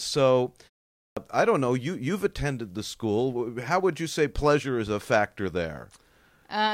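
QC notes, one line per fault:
0.93–1.17 s, clipped start after a pause: after a 0.32 s silence, the first 236 ms of sound is missing and it bursts in abruptly, as the output wakes and relocks too slowly. Unlike muted pauses, which only drop the background, actual sound is lost.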